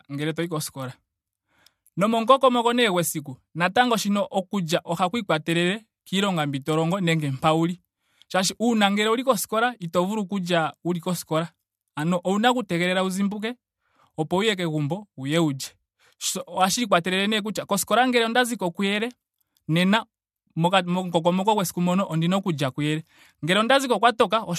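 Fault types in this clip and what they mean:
No faults can be heard anywhere in this speech recording. There is nothing to list here.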